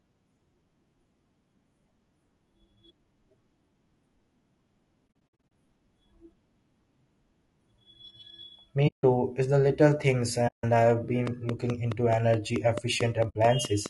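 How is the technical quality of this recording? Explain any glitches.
The recording's technical quality is poor: plainly audible codec coarseness runs throughout, the audio drops out in four places, and a run of clicks sits over the final seconds.

Low-delay AAC compression, throughout: the sound was likely encoded with AAC-ELD, the short-frame codec used for video calls, at a low bitrate (the damage fits roughly 32 kbps). Short frames resolve harmonics poorly, so the speech sounds rough and grainy, with noise filling the gaps between harmonics and a thin, synthetic-sounding top band.

AAC frame loss with muting, at 5.08 to 5.51 s, 8.87 to 9.04 s, 10.47 to 10.64 s and 13.29 to 13.36 s: the decoder lost whole frames and zeroed their spectrum. Overlapping windows fade the sound out and back in, leaving soft-edged holes. The first stretch is patchy, about 240 ms missing in gaps of up to around 70 ms. 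The next two each lose 160 ms, and the last loses 60 ms.

Train of clicks, from 11.27 s to 13.87 s: a pulse of much the same shape repeats at a steady 4.6 per second, around 15 in all, peaking about 10 dB above the speech. It is heard as regular ticking laid over the sound, likely from electrical interference or a faulty connection or power supply.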